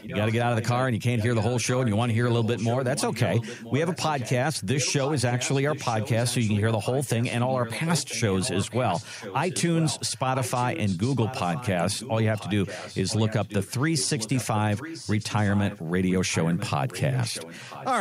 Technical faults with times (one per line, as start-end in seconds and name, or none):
0.00-0.82 echo leak
1.18-17.87 echo leak